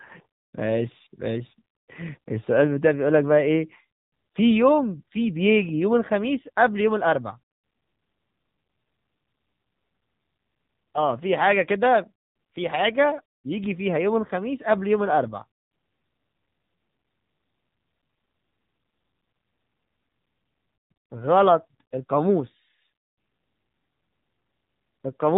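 Throughout, the speech has passed through the AMR narrowband mobile codec, which keeps nothing above 4 kHz and rebuilds the voice from a vocal-tract model fed by sparse pulses. The plainly audible buzzy, synthetic edge fits a low mode around 7.4 kbps.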